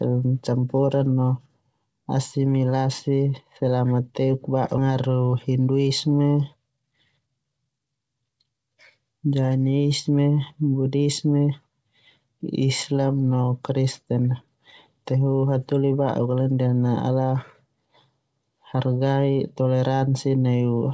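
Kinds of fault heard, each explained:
Skip ahead: A stretch of speech was dropped, about one and a half seconds, so playback jumps forward at 4.78 s, right after "asimilasi selama teuk", with the two sides joined almost seamlessly and no audible silence bridging the missing material.
Jitter buffer speed-up: With too much audio waiting in the buffer, the receiver repeatedly removed short pitch-period slices to catch up. Speech runs faster at unchanged pitch, about 10% faster from 5.33 to 5.86 s and 20% faster from 6.56 to 8.23 s, sounding hurried.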